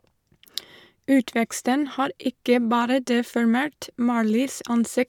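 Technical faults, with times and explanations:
No technical faults are audible in this speech.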